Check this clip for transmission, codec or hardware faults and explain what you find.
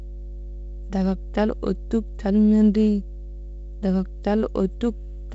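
One fault is present: mains hum runs through the whole speech clip. A steady 50 Hz tone, fairly strong at roughly 15 dB below the speech, comes from a ground loop or nearby transformer leaking power-line current into the signal. It shows as an unbroken horizontal line at 50 Hz on a spectrogram. The speech itself stops near 7.7 kHz, which fits wideband telephone coding of the G.722 kind.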